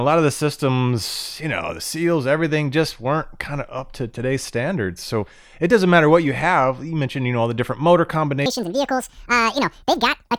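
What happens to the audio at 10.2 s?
At 10.2 s the speech is inside a section at the wrong speed, running from 8.46 s to the end of the clip at 10.39 s. Playback there runs at 1.8 times the original rate, so timing and pitch shift together: the voice sounds hurried and squeaky, raised by roughly ten semitones. The likely cause is that this stretch was resampled or played against the wrong clock, as can happen when a segment is joined with a sample-rate mismatch.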